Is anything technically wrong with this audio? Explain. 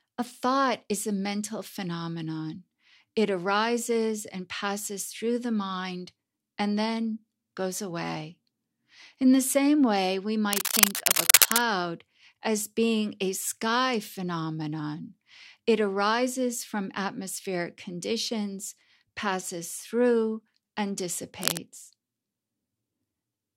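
Yes. Cable scratch noise appears twice: from 10.53 to 11.61 s, just after "the same way we", rising above the speech, and from 21.42 to 21.58 s, after "conditions passes through and", at about the speech's level. Each is a dense, irregular rustling burst, likely from a worn cable, connector or control being moved so its contact resistance jumps around. Its uneven, grainy texture distinguishes it from the isolated, regular ticks of digital clicks.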